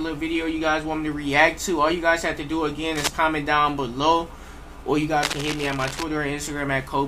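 Two bursts of cable scratch noise sit over the audio, a short harsh one from 2.95 to 3.12 s, fairly loud at only a few dB under the signal, and a longer, softer rustle from 5.17 to 6.04 s, about 10 dB down. Both have that dense, ragged crackle you get when contact resistance jumps around, most likely a worn cable or connector being moved or a dirty control being touched during the recording.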